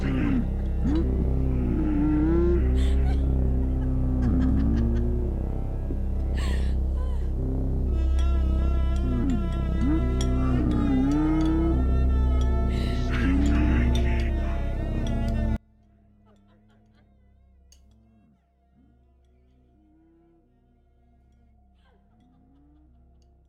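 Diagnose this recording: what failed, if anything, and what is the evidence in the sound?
From 15.56 s to the end at 23.49 s, the summed sound drops by about 35 dB to a faint residue, the signature of one channel inverted, likely a reversed wire in analogue wiring. Common content cancels in mono, leaving only inter-channel differences. A dropout would leave silence instead.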